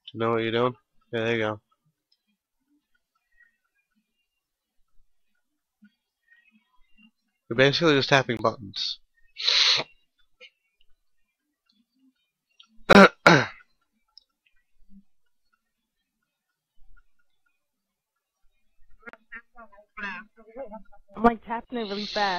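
Three short silent gaps at 8.37–8.39, 12.93–12.95 and 19.09–19.13 s (about 21, 21 and 43 ms) sound like a likely Bluetooth dropout, consistent with one or two lost packets.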